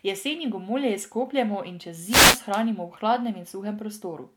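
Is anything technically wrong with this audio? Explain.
Yes. From 2.07 to 2.41 s the speech is hit by a wireless microphone noise hit, lasting about a third of a second. The radio link from an analogue FM microphone fades here. Reflected signals partly cancel the direct one at the receiver. As the carrier weakens, receiver noise rises and swamps the audio. It sounds like a brief swish or burst of static laid over the speech, which clears once the signal recovers.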